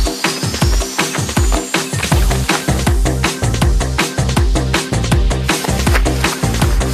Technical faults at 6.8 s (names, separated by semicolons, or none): none